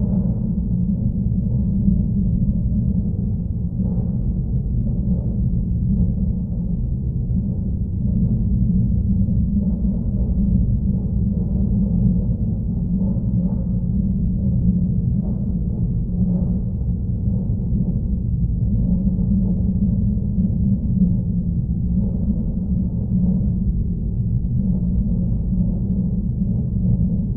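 No technical faults can be heard anywhere in this recording of sounds.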